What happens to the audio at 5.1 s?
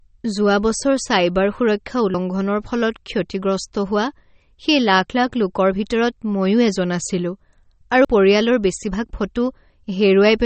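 At 5.10 s, audio is likely missing between chunks: the recording chain, which appears to work in 3 s chunks, dropped roughly 50 ms while handing over from one chunk to the next. The two sides are butted together, so the sound jumps abruptly forward with a small skip.

Across this moment, as throughout, MP3 compression at what sounds like a low bitrate, likely near 32 kbps, has cut everything above 8.4 kHz and thinned the weaker detail. The result is plainly audible: a dull, watery, swirling quality with smeared onsets.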